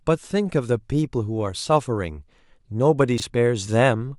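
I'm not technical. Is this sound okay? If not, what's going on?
No. At 3.18 to 3.22 seconds there are chunks out of order: a 20-millisecond piece plays one slot late, giving a quick jumbled moment. Unlike a dropout, nothing is missing.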